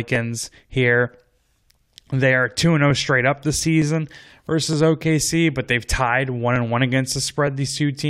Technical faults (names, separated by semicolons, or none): clock drift buffer slips